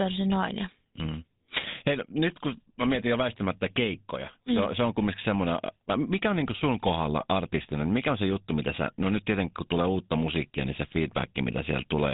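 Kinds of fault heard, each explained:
GSM full-rate codec: the old GSM speech coder runs through the whole clip, modelling the vocal tract and driving it with a sparse, regular pulse train, which fits a 13 kbps rate. Nothing gets through above 3.8 kHz, and the voice has a plainly audible buzzy, gravelly roughness.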